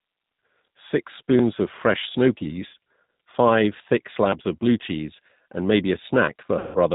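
G.729 codec damage runs through the whole speech clip at 8 kbit/s. The decoder rebuilds each 10 ms frame from a vocal tract filter, a pitch predictor and a handful of pulses, so nothing above 4 kHz survives. The voice is band-limited and plainly rough and synthetic.

VoIP packet loss concealed by the speech codec comes first at 2.67 to 2.74 s, just after "of fresh snow". About 60 ms of audio went missing, which fits three 20 ms packets. The decoder filled the hole by repeating its last pitch and filter with falling gain, so the sound smears into a short stretched sound that sags. Because each frame builds on the previous one, the voice stays thin for a moment after real packets resume.

Audio missing between chunks follows as a single skip at 4.32 s, right before "of blue cheese and". Roughly 20 ms drops out and the two sides butt together with no silence, giving a small jump. It is likely caused by a recorder or processor losing a sliver of audio while closing one chunk and opening the next, and the timing fits one-second chunks.

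The second packet-loss gap, at 6.59 to 6.78 s, is far longer. About 160 ms is gone, consistent with eight packets. Concealment stretches the last sound into a drawn-out buzzy, coloured tone that fades as the decoder lowers the gain frame by frame. The speech that follows recovers weakly because the codec's internal state has to rebuild from the degraded frames.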